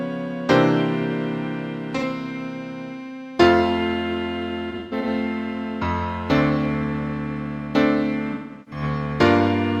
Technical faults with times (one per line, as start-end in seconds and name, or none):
1.97-2.03 AAC frame loss with concealment
4.70-5.07 AAC frame loss with concealment
8.33-8.82 AAC frame loss with concealment